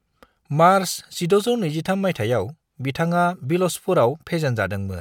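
No technical faults occur at any point in the speech, so there is nothing to place in time order.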